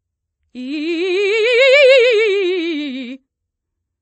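From start to finish the music is band-limited, with nothing above about 8.3 kHz, and it carries two overlapping layers of coding damage, heard together. This is likely transcoding between lossy codecs, which fits a low-rate MP3 near 32 kbit/s re-encoded as WMA at around 64 kbit/s. The second encoder spends its bits on the first one's artefacts, and the lowest cut-off in the chain remains.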